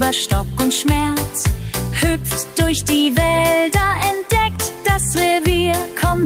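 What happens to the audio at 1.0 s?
Nothing goes wrong at 1.0 s; the audio carries on intact through that moment with no dropout, click or distortion.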